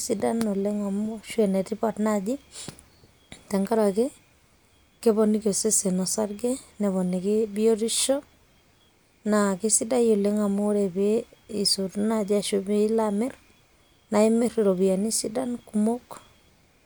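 At 7.03 s there is a bit error spike. A single bit flipped in the digital data, so the sample value jumps by a power of two, peaks at about -32 dBFS, and snaps back within a couple of samples. It sounds like one sharp, broadband tick unrelated to the speech.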